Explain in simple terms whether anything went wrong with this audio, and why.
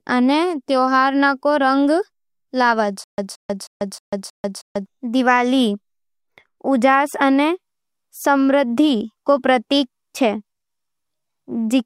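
From 3.04 to 4.86 s, the speech breaks into a stutter with silent gaps. A short burst of about 173 ms plays, then total silence for about 142 ms. The same burst comes back six times, at a steady beat of roughly three per second. The likely cause is a player or stream that stalled. Each time it tried again, it replayed its last scrap of sound and then ran dry. Whatever should have been heard there is missing.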